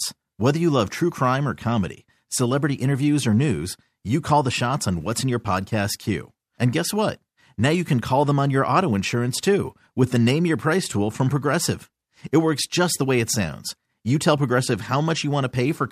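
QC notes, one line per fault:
0.10–15.91 s, clock slip clicks: soft rattle of single-sample ticks roughly every 20 ms, likely unsynced clocks about 0.1% apart; faint evenly spaced vertical spectrogram lines.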